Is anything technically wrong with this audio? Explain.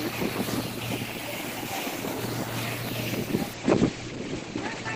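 Yes. From 3.55 s to the end, a call bitrate drop occurs: the encoder was starved of bits, consistent with a fall from roughly 32 to 12 kbps, so it codes coarsely and cuts the top end from 20 kHz to 8 kHz, leaving the sound muffled and rough.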